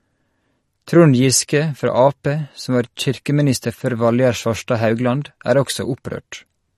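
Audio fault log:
Throughout: MP3 compression. The speech carries nothing above 12.6 kHz and has a plainly audible watery, swirling texture, with sibilants turning metallic and chirpy and consonant onsets smeared. This is likely a bit-starved MP3 encoder, and the damage fits a low bitrate around 40 kbps. With too few bits, the encoder drops the treble and zeroes quiet frequency lines that flicker between frames. A simple low-pass filter would dull the top without this shifting, bubbly artefact.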